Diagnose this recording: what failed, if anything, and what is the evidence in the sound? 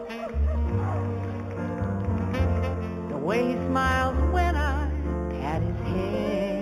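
Sample-rate conversion interpolated linearly, apparently from 8 kHz to 48 kHz. This imaging from linear upsampling leaves faint 4 to 8 kHz mirror images, a metallic shimmer throughout.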